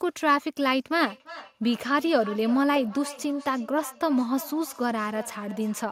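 A speech recording with feedback echo between two devices from 0.91 s to the end at 5.9 s. Each phrase returns about a third of a second later, thinner and more ringing, peaking about 17 dB below the speech. The steady interval and progressive thinning set it apart from room reverberation, which decays smoothly. The cause is two devices in one room on the same call, each microphone picking up the other's loudspeaker, which neither echo canceller removes.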